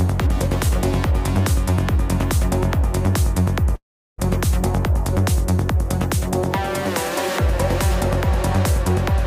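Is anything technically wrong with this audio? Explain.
Yes. From 3.75 to 4.20 s there is a call audio freeze: the sound stalls, leaving a short decaying fill and then about 0.37 s of silence, and resumes where it stopped. Late packets likely drained the jitter buffer, inserting a 0.43 s gap without losing audio.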